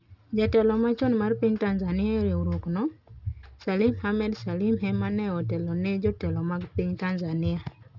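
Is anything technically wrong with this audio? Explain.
Yes, aliasing runs throughout: content above 6 kHz was folded back down rather than filtered off, which fits resampling to 12 kHz, leaving sibilants gritty and metallic, with the folded content roughly 30 dB below the signal.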